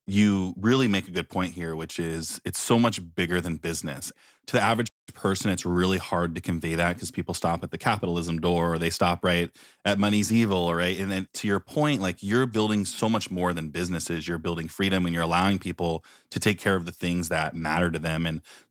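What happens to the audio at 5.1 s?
At 5.1 s the speech comes out of a playback stall: the sound cuts off mid-flow at 4.87 s and stays silent for about 0.2 s, until "person it's really hard" resumes at 5.09 s, likely because the player ran short of data or its thread was blocked. The waveform shows a flat line and the spectrogram an empty vertical band across all frequencies.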